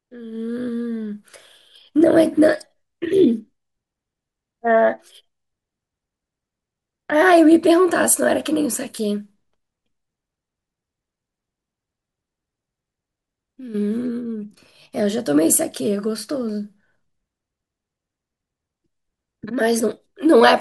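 No technical faults detected.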